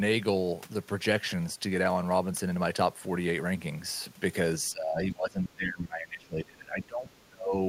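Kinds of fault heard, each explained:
Speech suppressed in double talk: From 4.71 to 7.55 s the voice sinks by as much as about 25 dB, likely because the echo canceller mistook overlapping talk for echo.
Other side's voice leaking through: A very faint scrap of a second voice appears at 7.12 to 7.19 s, likely loudspeaker sound the echo canceller failed to fully remove.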